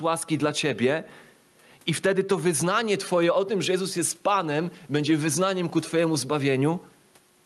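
Gain pumping runs throughout the speech. The input gain is likely set far too high, so a fast limiter clamps down on each loud syllable. Faint room noise sits under the speech, and the gain swings by around 10 dB, leaving the level squashed.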